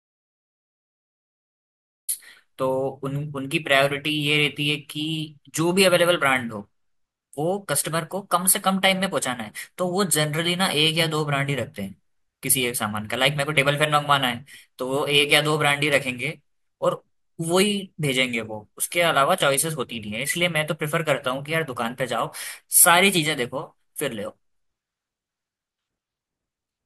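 From the very start to about 2.09 s there's an audio dropout to silence: pure silence, no room tone, likely a lost input link, before the speech cuts in mid-flow.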